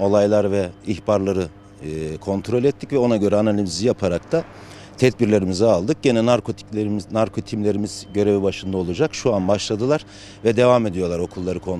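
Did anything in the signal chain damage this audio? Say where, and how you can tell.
Yes. Mains hum enters in the analogue wiring. A steady 50 Hz tone runs throughout, roughly 25 dB below the signal, pointing to a ground loop or nearby transformer.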